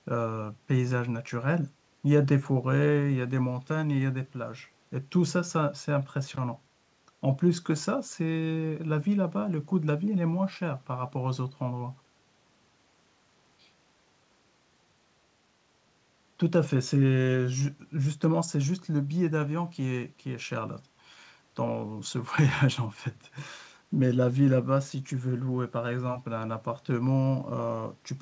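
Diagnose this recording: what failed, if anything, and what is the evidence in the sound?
Nothing failed: the speech came through a call path with no dropouts, glitches or distortion, and the empty band above 8 kHz fits a wideband codec such as G.722 at 64 kbps working as designed.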